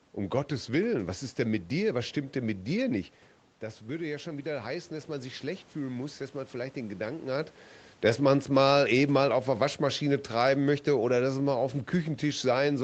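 Just after "denn mit dir nicht", from 3.61 to 7.37 s, the speech and the room noise behind it swell up together over nearly four seconds. This is automatic gain rising. The input fell by about 9 dB as the talker moved away from the microphone around 3 s. The gain control found the signal too quiet and raised its gain by about 5 dB, so it won back only part of the lost level.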